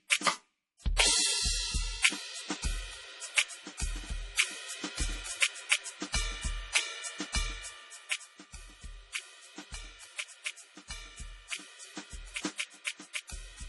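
From start to finish the music carries heavy codec damage, likely MP3 compression at a low bitrate, around 32 kbps. Short on bits, the encoder drops weaker frequency lines frame by frame, giving a watery, swirly texture, and nothing survives above 11.4 kHz.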